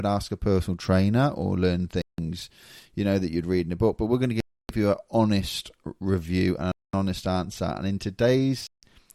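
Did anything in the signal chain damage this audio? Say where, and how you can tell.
Yes. The speech cuts to dead silence four times: 2.02–2.19 s, 4.40–4.69 s, 6.72–6.93 s and 8.67–8.83 s, gaps of 160 to 290 ms. This is likely a Bluetooth stall at playback. Delayed packets emptied the headphone buffer until resent data arrived.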